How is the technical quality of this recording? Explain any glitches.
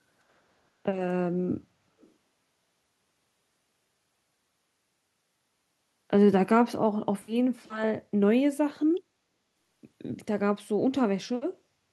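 Echo leak from 2.0 to 2.11 s: a far-end loudspeaker's echo canceller likely failed to remove everything its microphone picked up, sending that pickup back down the line. The result is a brief, very faint copy of the speech arriving 378 ms late, far below the direct speech.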